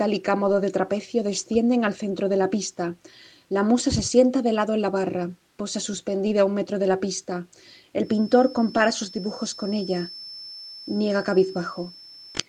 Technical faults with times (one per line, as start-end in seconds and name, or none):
7.98-12.49 feedback whistle